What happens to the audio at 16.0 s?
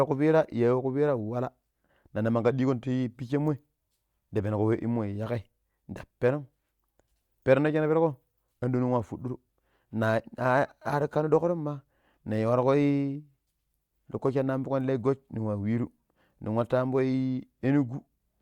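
At 16.0 s the speech carries on intact, with no dropout, click, distortion or other fault at that moment.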